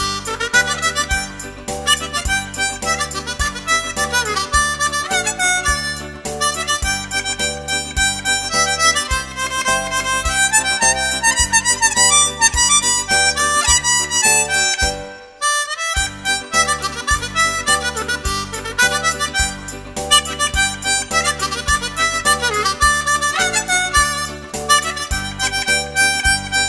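No technical faults can be heard in this audio.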